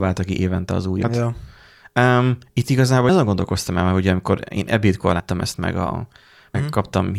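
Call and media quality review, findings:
Compressed frames skipped in the speech at 1.04 s (roughly 150 ms lost) and at 5.20 s and 6.54 s (roughly 70 ms each). The decoder dropped whole 32 ms frames, so the audio jumps ahead at each point.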